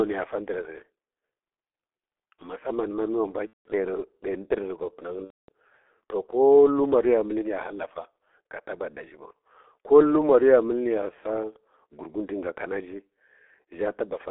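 Throughout, the G.723.1 codec at 6.3 kbit/s squeezes the speech into 300 Hz to 3.5 kHz, leaving it muffled and hoarse with smeared consonants. A spectrogram shows a hard ceiling near 3.5 kHz. At 3.47–3.67 s and 5.25–5.49 s, VoIP packet loss concealed by the speech codec fills gaps of about 180 ms and 240 ms, which fits runs of lost 30 ms frames. The decoder extends its last pitch and filter with falling gain, producing a fading buzzy tone or coloured noise that is muted from the third lost frame. This shows as frozen, smeared harmonics above a shrinking waveform envelope.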